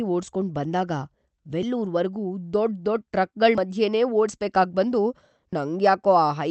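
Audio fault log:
1.63 s, 3.58 s, 5.53 s: audio missing between chunks, brief skips about 50 ms long at regular intervals, likely from a recorder losing audio at each 2 s chunk boundary.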